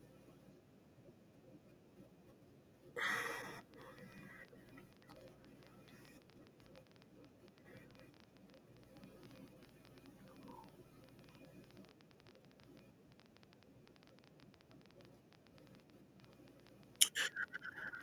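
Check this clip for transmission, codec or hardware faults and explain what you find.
There's one fault here, a train of clicks running from about 3.6 s right through to 18.0 s. That's roughly 150 clicks at an average of 10.6 per second, irregularly spaced, each much the same shape and peaking around 10 dB above the speech. The likely cause is something injecting pulses, such as interference from nearby gear or a faulty connection or power supply. You hear it as uneven ticking laid over the talking and the pauses alike.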